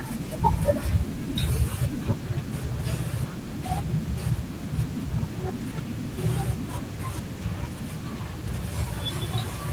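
Nothing in this speech stood out as a technical fault on listening.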